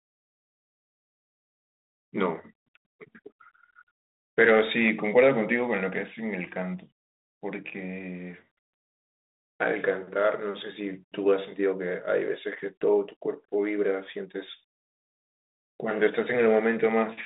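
The speech runs over a G.726 ADPCM telephone path at 32 kbit/s, held to a line band of 250 Hz to 3.7 kHz with only the light coding texture expected at that rate, and there are no faults to report.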